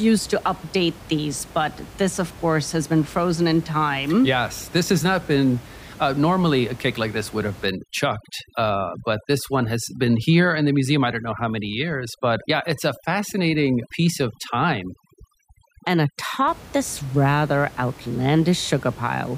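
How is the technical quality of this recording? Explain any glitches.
One processing fault affects the speech, with room noise sitting about 20 dB below the voice. From 7.66 to 16.48 s, overdone noise removal cuts frequency bands near the noise estimate, leaving the speech over a lowered background that breaks up into twinkling specks.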